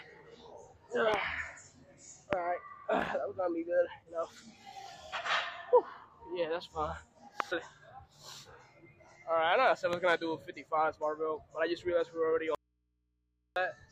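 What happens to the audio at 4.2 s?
Nothing goes wrong at 4.2 s; the audio there plays through intact, with no dropout, click, distortion or other disturbance.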